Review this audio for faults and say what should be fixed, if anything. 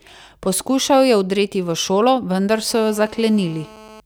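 GSM phone buzz runs from 2.71 s to 4.00 s. It is a hard, raspy buzz at 217 Hz, rich in harmonics, sitting about 23 dB below the speech. It holds steady throughout, which points to a phone on a call. The handset transmits in bursts 217 times a second. The audio circuitry rectifies those radio pulses into an audible tone. The tone has no relation to the speech. To prevent it, keep mobile phones switched off or well away from microphones, cables and preamps while recording.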